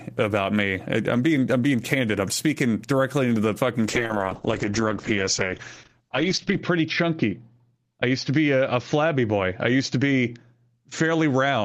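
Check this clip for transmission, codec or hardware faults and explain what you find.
One transmission fault is present: a call bitrate drop starting at 3.88 s and lasting to the end of the clip. From that point the speech loses its top end and turns rougher and more smeared, holding its worst state for about 2.7 s. The call's bandwidth estimate fell, so the encoder had far fewer bits to spend. The sound fits a fall from around 32 to 8 kbps, and the codec coded each frame more coarsely and cut the audio band from 20 kHz to 8 kHz.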